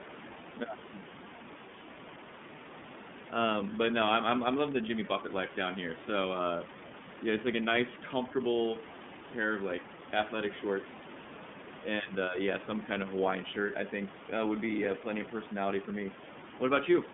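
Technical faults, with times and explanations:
Throughout: iLBC codec. The speech is squeezed into a narrowband phone line, roughly 150 Hz to 3.5 kHz, so there's no air or sibilance up top. Each frame's excitation is coded on its own, which gives that plainly audible rough, slightly synthetic grain, and the texture fits iLBC's 30 ms frame mode at about 13.33 kbps. The room noise, sitting about 18 dB under the speech, picks up the same coarse, smeared quality.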